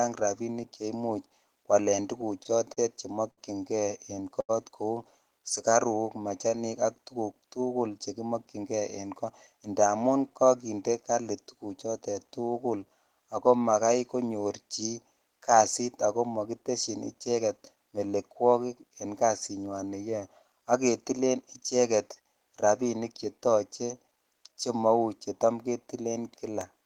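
From 2.21 to 3.39 s the speech shows repeated stalls (stutter). Packets arrived late four times, and the jitter buffer ran dry each time. The receiver held the last sound for 131 ms in total, with the longest hold 67 ms. Nothing is lost, but the phrase drags and catches.

At 4.40 s there is a short stall from a late packet. One packet missed its slot, so the receiver stretched the preceding sound for 84 ms and then resumed where it left off. The result is a single held sound with a faint buzz or dip, and the playout delay grows by 84 ms.

Between 5.39 and 6.00 s a jitter buffer slow-down plays the speech at 93% speed. The receiver repeated individual pitch periods to add 50 ms of reserve, so the pitch stays the same while syllables are drawn out.

From 8.17 to 9.61 s a jitter buffer speed-up runs the speech at 108%. The receiver trimmed short pitch-period-length pieces, roughly 150 ms in all, to pull the excess delay back down. 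The pitch is unchanged, but the delivery sounds hurried.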